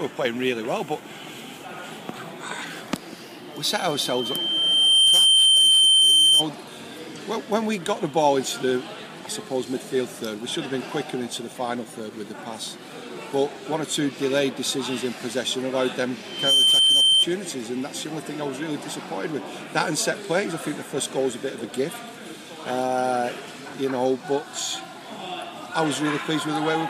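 There's loudspeaker feedback squeal in two places, both on the same 3.1 kHz tone. The first runs from 3.70 to 6.47 s and swells up over roughly a second and a half. The second, from 16.25 to 17.26 s, jumps up in a fraction of a second. Both peak at around 10 dB above the audio. The mic is hearing its own speaker, and at 3.1 kHz the loop gain tops one, so that tone keeps feeding itself.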